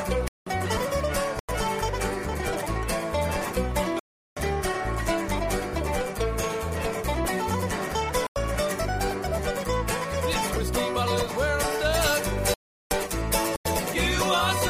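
Hard-edged holes break up the sound at 0.28 to 0.46 s (about 186 ms), 1.39 to 1.49 s (93 ms), 3.99 to 4.37 s (372 ms) and 8.27 to 8.36 s (93 ms). These are blocks of digital silence: whole buffers of zeros, most likely ones that were never filled in time. Their lengths fit blocks of 4096, 8192 and 16384 samples at 44.1 kHz.

From 11.94 to 13.94 s the sound turns thin, bright and sibilant. This is pre-emphasis left on. The treble boost of the CD 50/15 µs curve was never undone, which leaves 10 kHz about 8 dB too strong relative to 1 kHz.

Within that stretch, two more blocks of digital silence cut in at 12.54 to 12.91 s (372 ms) and 13.56 to 13.65 s (93 ms).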